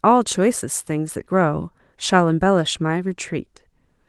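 No technical faults turn up anywhere in this speech clip. The Opus voice compression is audible only as a light coding texture, and the band reaches up into the high frequencies the way a fullband hybrid setup at a moderate rate such as 24 kbps would allow.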